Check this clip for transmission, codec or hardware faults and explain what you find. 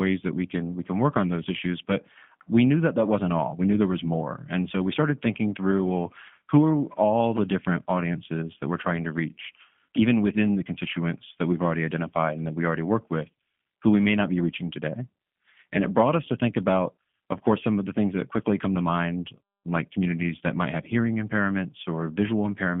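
Three faults are present: G.729 codec coding across the whole clip, two brief gaps between chunks, and one concealed packet loss.

G.729 codec, throughout: the speech is squeezed into a telephone line band of roughly 150 Hz to 3.4 kHz, and the roughness fits an 8 kbit/s G.729A stream. The decoder rebuilds each 10 ms frame from a vocal tract filter, a pitch predictor and a few pulses rather than from the waveform itself, so the voice sounds plainly rough and synthetic. On a spectrogram, energy stops sharply near 3.4 kHz with almost nothing below 150 Hz, and the harmonics look smeared and grainy.

Gap between chunks, at 7.37 s and 17.38 s: at each point about 7 ms of silence interrupts the sound. No audio is missing. The sound is interrupted at a join, and the two gaps sit 10 s apart, which points to 10 s chunks. Each is heard as a tiny hole or dip. On a waveform it shows as a flat near-silent slot with abrupt edges, and on a spectrogram as a thin vertical blank stripe.

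VoIP packet loss concealed by the speech codec, 11.52 to 11.56 s: the dropout fits a single lost 10 ms frame. The decoder filled the hole by extending its last pitch and filter settings at reduced gain. Because each frame builds on the previous one, the voice stays weak or distorted for about 40 ms in total. On a spectrogram the harmonics look frozen and regular before fading, and the waveform envelope dips briefly.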